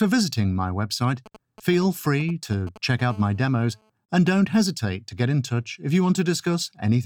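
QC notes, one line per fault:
1.26 to 3.01 s, GSM signalling bursts: a galloping dit-dit-dit of short raspy buzzes sits around 20 dB below the sound. A 2G phone close by is sending brief groups of radio bursts while it signals to the network, before a call or text. The audio circuit rectifies each group, so it turns into audible clicks. Inside each group the pulses repeat at 217 Hz, which gives the short buzzes their pitch.
3.10 to 3.90 s, GSM phone buzz: a hard, steady, raspy buzz replaces the galloping pattern, at about 30 dB below the sound. The phone has moved into a call and now transmits bursts continuously, 217 times a second. The audio circuit rectifies that radio pulse train into a 217 Hz tone. The pulses are sharp-edged, so the buzz carries many harmonics. Nothing in the sound itself causes it.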